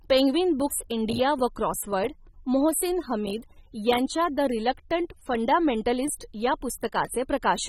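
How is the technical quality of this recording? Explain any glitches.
The recording has one audible fault that runs through the whole speech clip. AAC compression, present throughout, is the likely cause: the encoder quantised the spectrum so coarsely that the damage is plainly audible, which fits a low bitrate near 27 kbps. Nothing sounds above 16.5 kHz, so the speech comes across dull and smeared, with a warbling, fizzy edge on sibilants.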